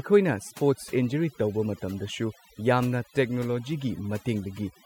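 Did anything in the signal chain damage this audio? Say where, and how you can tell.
Yes. Overdone noise removal, applied in processing, affects this speech from start to finish. Pauses drop to near silence with twinkling specks. A suppressor set too strong cut bands near its noise estimate, taking quiet voice detail too.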